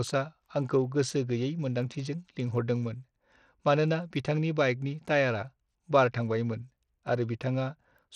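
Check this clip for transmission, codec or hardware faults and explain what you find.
One fault runs through the whole recording: codec damage that is plainly audible, most likely from Bluetooth SBC compression.

Bluetooth SBC compression, throughout the clip: the signal has been split into a handful of broad frequency bands and each band given a share of a tight bit budget, with no model of what the ear notices most. At this level of damage, which fits a low bitrate of around 80 kbps, the upper bands are starved. The treble in the speech thins out and flickers in and out, and a gritty, grainy noise with aliasing clings to the sound.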